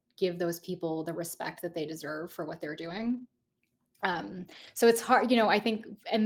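A speech clip with three stretches of lost packet rebuilt from error correction: 0.59 to 0.61 s between "give those" and "people the respect that", 2.81 to 3.23 s after "deserve for what they're", and 4.11 to 4.69 s before "so it's". Each spot turns rough and noisy because the decoder played the low-bitrate copy carried in the following packet. Unlike concealed loss, nothing drops out, smears or repeats.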